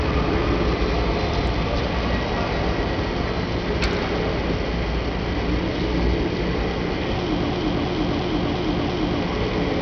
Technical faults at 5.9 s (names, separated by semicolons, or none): Bluetooth SBC compression